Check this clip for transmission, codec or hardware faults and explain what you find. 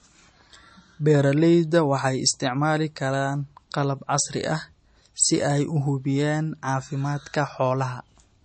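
The whole clip carries MP3 compression damage, and it's plainly audible. There's nothing above about 8.4 kHz, a hard treble cut of the kind an encoder makes when it's starved of bits, and the dull top end fits a low bitrate around 32 kbps. With so few bits, weak frequency lines drop in and out between frames, so the speech takes on a watery, swirly texture, s sounds go metallic and consonant attacks smear. That's most likely a heavily squeezed MP3 encode.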